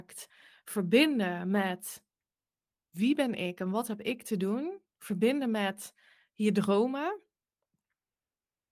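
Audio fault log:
No faults can be heard anywhere in this speech recording. There is nothing to log.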